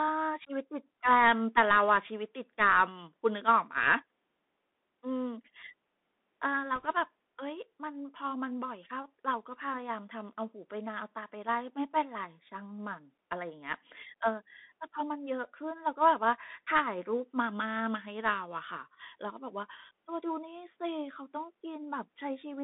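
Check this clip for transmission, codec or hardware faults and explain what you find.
Two faults are present: the whole clip comes through a Bluetooth headset link, and a short burst of corruption hits it once.

Bluetooth CVSD headset codec, throughout: each sample is a single up-or-down bit with an adapting step, so fast, loud high content outruns the step and distorts. The speech sits in a narrow 200 Hz to 3.6 kHz band, sibilants turn scratchy, and granular hiss runs underneath, all consistent with a 64 kbps CVSD stream.

Bit errors on a Bluetooth voice link, 6.76 to 6.86 s: flipped bits, at a rate of about 0.7 percent, each nudge the step-tracking only slightly and fade out. Instead of loud clicks, this 100 ms stretch of speech gets a brief rushing, crackly noise.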